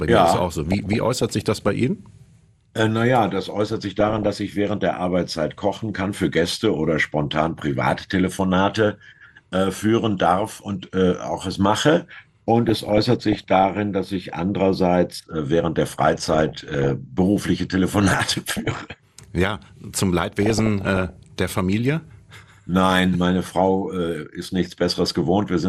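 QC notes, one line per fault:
Throughout: MP2 compression. The sound is dull and lacks top end. A gurgling, granular roughness sits under all of it. High frequencies come and go rather than staying steady. This is likely MPEG Layer II coding starved of bits, which fits a rate around 80 kbps. Upper sub-bands get switched off when bits run short, so the treble drops out. The bands that remain are coarsely quantised, which produces the grain.
0.69–1.68 s, 3.66–4.27 s, 12.69–13.69 s, 15.92–16.90 s, 17.94–18.93 s, 20.25–21.24 s: DAB burbling. Each burst lays burbling blips over the sound. Most bursts last about a second. The one at 3.66 s is shorter. Bit errors near half a percent, a little higher in some bursts, get past the error correction. Corrupted samples put short blips of noise in single sub-bands, and corrupted scale factors make sub-bands jump in level for up to a frame.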